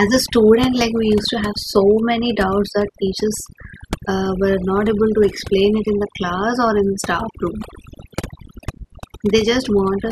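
Overdone noise removal runs through the whole speech clip. A noise reduction stage was set too strong. Bands near its noise estimate are pushed down or cut entirely. Quiet speech detail is lost with them. The background drops and breaks into twinkling specks.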